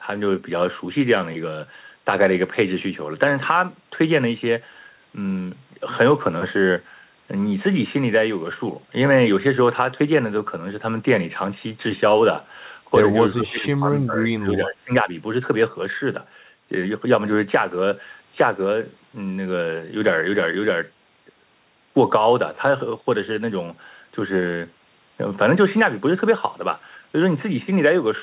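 From 13.35 to 14.16 s the speech dips noticeably and thins, then from 14.33 to 15.11 s it drops much further, nearly cutting out. This is speech suppressed in double talk, likely from an echo canceller turning down the talker while the far side spoke over the narrowband, 4 kHz-limited call audio.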